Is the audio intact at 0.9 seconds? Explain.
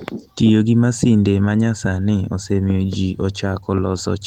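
Yes, the audio is intact at 0.9 seconds, with no fault at that moment.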